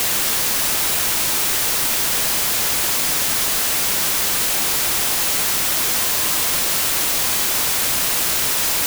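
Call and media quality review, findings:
Wrong sample width, throughout: loud broadband noise with the original buried inside, slowed to 0.75x and pitched down. 32-bit samples read as packed 24-bit, so byte boundaries misalign. Spectrogram: dense full-band wash; waveform: dense hash.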